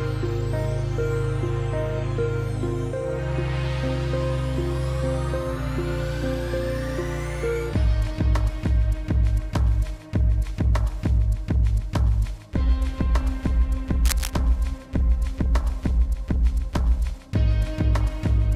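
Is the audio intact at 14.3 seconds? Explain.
No. From 14.05 to 14.30 s a burst of scratching, rustling noise sits over the sound, at roughly 10 dB below the signal. This is cable scratch noise, likely from a worn cable or connector being moved, its contact resistance changing rapidly and briefly.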